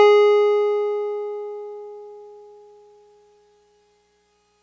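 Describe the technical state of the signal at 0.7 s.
At 0.7 s the music plays through intact, with no dropout, click, distortion or other fault at that moment.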